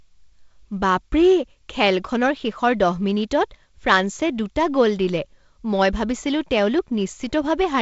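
No faults are present in this speech, which carries the band-limited character of G.722 wideband telephone coding, with nothing above about 7.7 kHz and only the light upper-band hiss and slight lower-band graininess that point to one of its lower bitrate modes.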